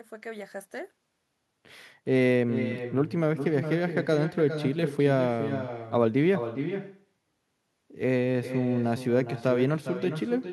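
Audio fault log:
throughout, echo with no canceller: each stretch of speech returns roughly 0.4 s later, about 9 dB quieter and thinner, because the far end's loudspeaker feeds its microphone unchecked. The waveform shows a smaller delayed copy after every burst; the spectrogram shows faint duplicated harmonic bands.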